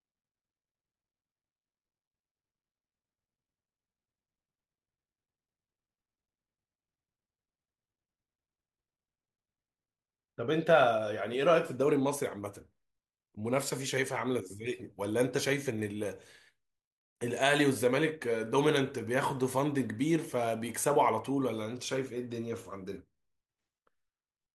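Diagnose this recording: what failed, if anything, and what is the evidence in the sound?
Nothing failed here as far as I can hear: the speech runs along without anything in the sound pointing to a problem at any stage of the chain.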